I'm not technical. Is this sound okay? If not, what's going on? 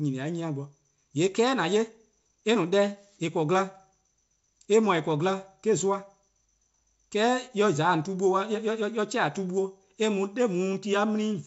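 Yes, no faults: this is speech carried over G.722 wideband telephone coding, which keeps it clear up to about 7 kHz, with at most a faint hiss in the top range.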